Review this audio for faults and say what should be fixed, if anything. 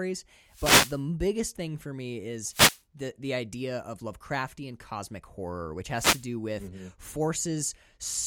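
There are three wireless microphone noise hits in this speech: 0.47 to 1.04 s, just before "thing for me"; 2.47 to 2.83 s, between "thing for me" and "the the idea of"; and 5.90 to 6.29 s, right after "cosmic horror which". Each one is a short swish of static, where the FM link faded as reflections cancelled and the receiver's own noise came up. You'd fix it with diversity receivers, better antenna placement and a clear line of sight to the transmitter.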